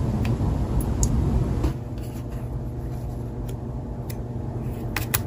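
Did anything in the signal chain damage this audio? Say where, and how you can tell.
Yes. A steady low tone sits under the sound for the whole clip, pitched at 60 Hz with some low harmonics and loud, roughly 10 dB below the signal. This is mains hum, picked up in the analogue wiring where a ground loop or nearby transformer couples the power line into the signal.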